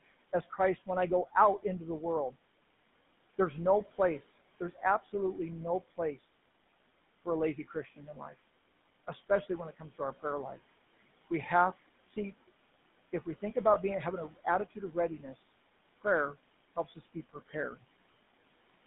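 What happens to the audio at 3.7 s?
Between 3.38 and 6.33 s, speech is cut by the noise suppressor. It mistakes parts of the speech for noise and turns them down by up to about 20 dB. Soft sounds are swallowed, adding up to under a second in total.

Noise suppressor artifacts run through the moment too. The background is pulled down by about 20 dB between sounds, so the room noise sinks between words and rises under them.

The GSM full-rate codec adds a buzzy, gravelly roughness throughout. The sound is held to roughly 150 Hz to 3.6 kHz, in a 13 kbps stream.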